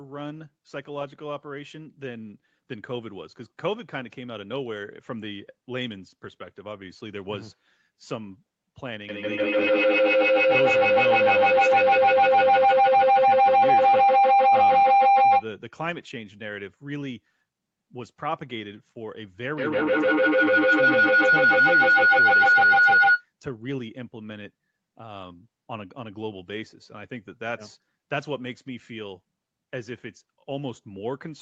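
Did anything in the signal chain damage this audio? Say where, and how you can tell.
Yes, there's feedback howl, and it comes from an acoustic loop rather than the wiring or codec: two devices on the same call are sharing a room. From 9.09 to 15.52 s a tone around 700 Hz builds until it's about 14 dB over the speech, and from 19.58 to 23.28 s it happens again, this time around 1.5 kHz and reaching the same level. Both events repeat at roughly 150 ms, which is the trip time round the loop. Each pass gains level, so the ring keeps narrowing onto whatever frequency the loop favours.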